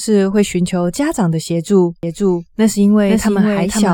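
At 2.03 s a slower second capture path likely joins the mix, making a doubled audio track: the speech repeats half a second late, somewhat quieter, until the end.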